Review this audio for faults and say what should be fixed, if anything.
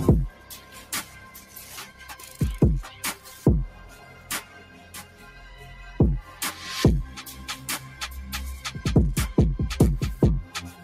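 A speech-oriented noise suppressor was left active across the whole clip, treating sustained tones, ambience and reverb tails as noise. Gain therefore rides up and down by roughly 10 dB, so the sound pumps and thins while attacks pass through largely intact.

Sound cut by the noise suppressor: the suppressor clamps down hardest at 0.32–1.16 s, 1.38–1.54 s and 3.97–4.30 s, with drops of about 5 dB, and at 4.61–5.22 s, with a drop of about 6 dB. Held material sinks and decays end early there.

To prevent this, disable speech noise suppression, or switch to a music mode, whenever the input is music or general sound rather than speech.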